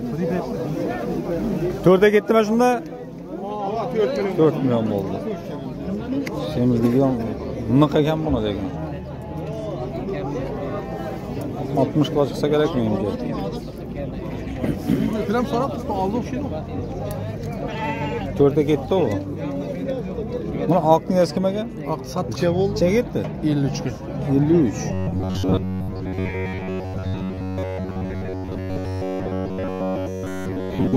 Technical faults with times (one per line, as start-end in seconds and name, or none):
24.93-30.96 robotic sound from repeated short buffers